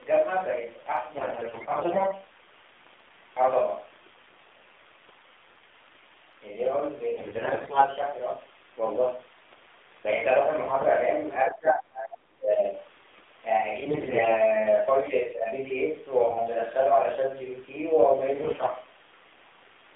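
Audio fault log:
Throughout: AMR narrowband mobile codec. The speech sounds thin and boxed in, confined to roughly 250 Hz to 3.6 kHz, with a plainly buzzy, synthetic edge. The codec samples at 8 kHz, so nothing above 4 kHz survives. It rebuilds the voice from a vocal-tract model driven by a few pulses per 5 ms subframe. The coarseness fits a low-rate mode around 7.4 kbps, where too few pulses leave the voice sounding artificial.
1.16–2.20 s, 7.16–7.87 s, 10.68–10.85 s, 13.80–14.35 s, 16.30–16.49 s, 18.34–18.69 s: AMR bit errors. In each burst the voice keeps its pitch and loudness but turns hoarse, scratchy and gargly. Flipped bits in the weakly protected parts of each frame put the excitation pulses in the wrong places and skew the finer pitch, gain and spectral values, while the checked core bits still pass. The bit error rate is about 15% in the first four bursts and lower at 16.3 and 18.3 s.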